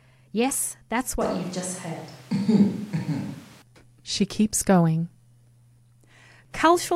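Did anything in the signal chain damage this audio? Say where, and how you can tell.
Yes. A switch to a distant microphone runs from 1.21 s to 3.62 s. The speech abruptly turns roomy and hollow, with thinner bass and background noise rising to roughly 25 dB below the speech, while the level barely changes. It snaps back at 3.62 s, likely because the close microphone's feed dropped at the capture stage.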